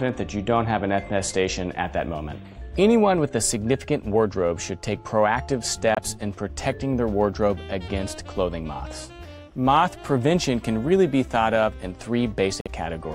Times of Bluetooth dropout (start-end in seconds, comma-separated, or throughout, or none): 5.95-5.99, 12.61-12.68